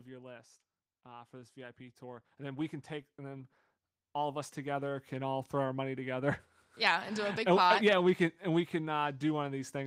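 From 1.02 to 3.57 s the speech and the room noise behind it swell together, climbing about 8 dB over roughly two and a half seconds, and from 4.12 to 6.06 s the same lift returns, about 7 dB over nearly two seconds. This is automatic gain rising: the gain control judged the input too quiet and raised its gain step by step. Because it scales the whole signal, the background grows exactly as much as the voice.

Between 6.82 and 9.51 s the level moves the other way, with the speech and its background sinking together by about 3 dB across almost three seconds. That is automatic gain falling: the control now judged the input too loud, or its background noise too strong, and eased its gain down gradually.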